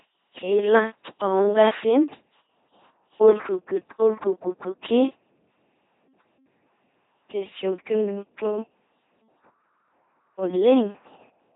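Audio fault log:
throughout, LPC-10 vocoder: heavy damage turns the speech into a buzzing robot voice, with each instant synthesised as a rigid pulse buzz or a noise hiss through a simple tract filter, consistent with a 2.4 kbit/s coder. The spectrogram shows stiff harmonic combs or flat noise, empty above 3.8 kHz.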